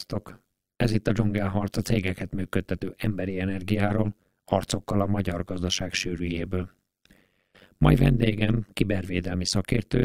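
Overlap-add ripple runs through the whole speech clip. The frames were recombined with an overlap whose gains do not sum to a constant, so the level dips by about 60 dB once per frame, around 100 times a second, giving a harsh, metallic buzz.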